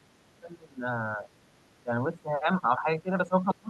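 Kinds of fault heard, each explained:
Background gated by the echo canceller: from 0.0 to 0.12 s, the room sound behind the speech sinks by up to about 6 dB and then recovers. The echo canceller, hearing the far end through the loudspeaker, pulled the microphone gain down to keep that echo from being sent back, and the quiet ambience went down with it. The dip is short, roughly a tenth of a second, and the background returns once the canceller releases.
Speech suppressed in double talk: from 0.4 to 1.31 s and again from 1.83 s to the end, the talker's level drops sharply, by roughly 15 dB at its deepest. This is likely the echo canceller meeting both sides talking at once. It cannot tell the near talker apart from the loudspeaker echo, so it attenuates the whole microphone signal and the talker gets suppressed along with the echo.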